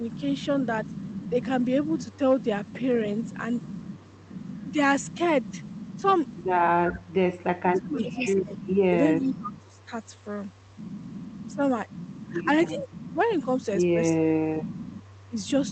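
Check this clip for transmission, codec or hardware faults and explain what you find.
Two echo-canceller faults appear in this speech, both heard over a band-limited call path consistent with Opus.

Echo leak, 0.84 to 9.85 s, 10.86 to 11.42 s, 13.03 to 13.07 s and 15.0 s to the end: the far end's canceller likely let loudspeaker pickup through, returning a faint copy of the voice about 0.33 s late, roughly 30 to 40 dB below the direct sound.

Speech suppressed in double talk, 1.31 to 1.35 s, 7.72 to 9.91 s and 11.5 s to the end: with both sides active, the canceller likely mistook the talker for echo and attenuated it. The voice dips slightly in the first instance, then falls about 20 dB, and later up to about 30 dB.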